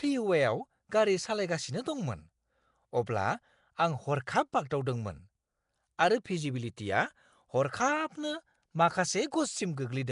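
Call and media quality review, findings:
Nellymoser compression, throughout: rough hissy halo and smeared, underwater tone on the speech, damage plainly audible, nothing above 10.6 kHz. Likely Nellymoser Asao coding at a rate that fits about 44 kbps; starved bands filled with noise.

Pre-echo at 4.52 s, 4.70 s and 6.24 s: brief hiss about 10 ms before sharp speech onsets, attacks softened. Transform codec spreading block quantisation noise into the quiet lead-in before each late-block transient.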